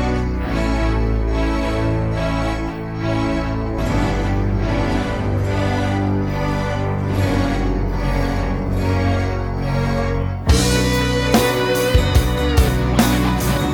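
A doubled audio track runs from 3.79 s to 10.23 s: a second, complete copy of the sound trails the original by about a second and a half, roughly 5 dB quieter, so everything is heard again shortly after itself. The copy carries the full frequency range with no decay or room colouring, and it cuts in and out abruptly at those times. The cause is likely a slower second capture path or two edit copies left out of step.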